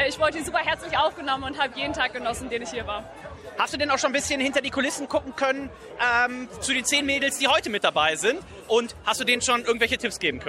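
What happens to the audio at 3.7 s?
Nothing goes wrong at 3.7 s; the audio carries on intact through that moment with no audible fault.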